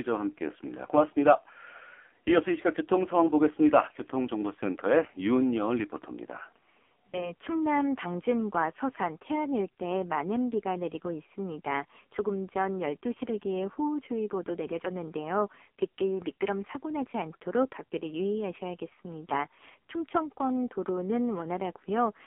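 AMR narrowband mobile codec, throughout: the speech is squeezed into a telephone band of 250 Hz to 3.4 kHz and rebuilt from a sparse pulse-driven vocal tract model. The damage is heavy, with a buzzy, synthetic edge that fits the low 5.9 kbps mode.

Lost AMR speech frames, from 7.10 to 7.33 s: the sound briefly dips or warbles, which fits a single lost 20 ms frame. The decoder carries the previous pitch and vocal tract settings forward at reduced gain, and the voice comes back weak or rough for a moment.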